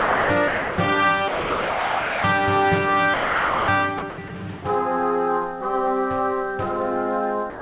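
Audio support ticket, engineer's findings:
Sound dropped by the voice detector: music gives way to steady comfort noise at 0.00–0.30, 0.48–0.78, 1.28–2.24, 3.14–3.68, 3.98–4.02, 4.10–4.18, 4.28–4.30, 7.50–end. Likely sender VAD misreading music as background. Smooth noise fill, no clicks or repeated fragments as in packet loss. Band stops near 4 kHz, consistent with G.711 call path.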